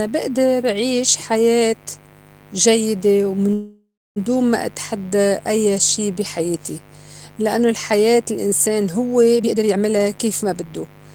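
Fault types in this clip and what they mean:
Mains buzz: A steady, raspy buzz built on 50 Hz and its harmonics sits under the speech for the whole clip, about 25 dB below it. It's the kind of spiky interference you get from a dimmer, rectifier or poor shielding.
Call audio freeze: From 3.53 to 4.18 s the sound stalls. The last bit smears into a fading buzz, and the final 280 ms or so go silent. Then it picks up with "دون ما اتحدّى أيّا". That's likely delayed packets draining the jitter buffer. Roughly 627 ms of gap gets inserted, and nothing is lost.
Jitter buffer speed-up: Between 9.35 and 10.88 s the speech runs at about 133% speed while holding the same pitch, so it sounds rushed. The receiver is trimming tiny pitch-period slices back to back to work off excess buffered delay, about half a second in total.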